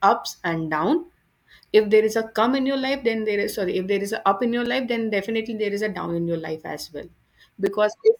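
At 1.65, 4.66 and 7.66 s the speech stops dead for about 6.5 ms, a gap between chunks. The audio arrives in 3.0 s pieces, and a sliver of silence is inserted at each join, so the second hole falls between "a up in your" and "life then definitely there". Unlike a dropout, nothing is missing: the speech resumes where it stopped. The hard-edged holes recur on an exact 3 s grid.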